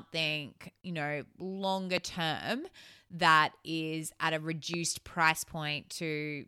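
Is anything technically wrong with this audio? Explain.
Yes. The speech is interrupted by two loud pops, at 1.98 to 2.00 s and again at 4.74 to 4.76 s. Each is a single sharp click-thump standing roughly 15 dB above the speech, which carries on underneath without a break. The likely cause is a sudden voltage step or spike, such as a switch, static discharge or driver glitch, added to the signal, with the following circuitry briefly shaping it into a short burst.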